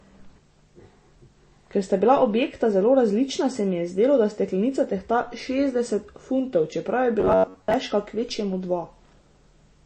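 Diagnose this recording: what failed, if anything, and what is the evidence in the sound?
The codec stage shows plainly audible MP3 compression throughout the speech. The remaining band has a watery, swirling texture as weak frequency lines drop in and out from frame to frame. Sibilants turn chirpy and attacks smear. That degree of damage fits a low bitrate of around 32 kbps, and lossy MP3 encoding is the likely cause.

From 7.20 to 7.74 s, just before "kvečjemu dva", the speech collapses into a rigid metallic buzz at 93.8 Hz that still roughly follows the syllables. This is robotic sound from repeated short buffers: one short block of audio is replayed over and over while fresh input is skipped. The repetition period points to a buffer of about 10.7 ms, and most of that half-second is repeated material. The failure sits at the driver or buffer stage, likely an underrun.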